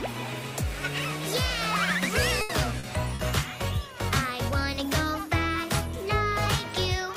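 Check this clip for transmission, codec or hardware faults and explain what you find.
Two kinds of transmission fault are audible, both from packets arriving too late or not at all, all within about a second.

Burst of packet loss, 2.41 to 2.51 s: roughly 80 ms of consecutive packets were lost, so the receiver extended and faded the last sound, producing a held buzz or fading hiss before the audio resumes with that stretch missing.

Short concealed packet loss, 2.79 to 2.85 s and 3.15 to 3.21 s: about 40 ms of audio missed the decoder each time, and the patched-in continuation blends back as a brief smear or wobble.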